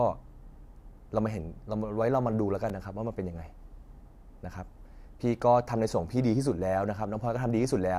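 Twice in this speech clip, new audio failed to reach the output device in time, so the device replayed its last buffer, a repeated buffer fault. The repeating piece is only about 1.3 ms long, which fits a 64-sample buffer, so each repeat is heard as a tiny click rather than a stutter. At 2.69 s several back-to-back repeats form a brief buzzy click and drop a few milliseconds of sound. At 5.42 s a single repeat gives a shorter click.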